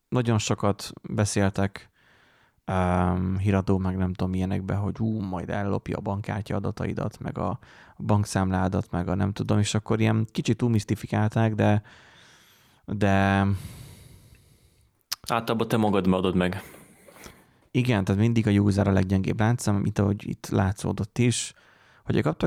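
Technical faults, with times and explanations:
No technical faults detected.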